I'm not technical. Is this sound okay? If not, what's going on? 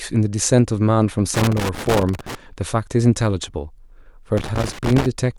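No. The speech has two bursts of loose connector crackle, from 1.34 to 2.35 s and again from 4.37 to 5.06 s. Somewhere in the cable chain a plug or jack is making poor contact, so as it shifts the signal rapidly cuts in and out, and any electrical offset on the line turns each break into a small pop. The result is the irregular scratching you hear over the voice. Reseating or replacing the cable usually fixes it.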